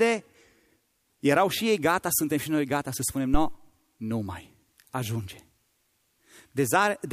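A speech recording with a phantom power thump at 3.34 s, lasting until about 3.60 s. A supply voltage switching on or off on the live input sends a step through the coupling capacitors, producing a deep thud that peaks at about -10 dBFS and dies away with a decay of roughly 58 ms. On the waveform it shows as a sudden large, slow swing that settles quickly. On a spectrogram it is a brief burst of energy concentrated at the lowest frequencies.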